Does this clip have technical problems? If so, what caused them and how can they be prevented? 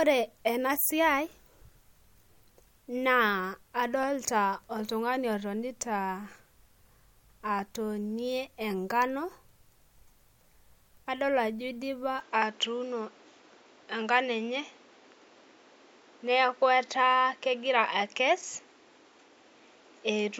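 Yes. From 12.2 s to the end, the speech loses all content above 7.5 kHz, its level shifts by about 5 dB and a new noise floor appears roughly 30 dB below the signal, with no gap at the change. The likely cause is an input switched to a poorer device, either another microphone or a headset's call profile, which passes a narrower band and brings its own noise. Lock the recording input to one device in the system settings before recording so it cannot change mid-session.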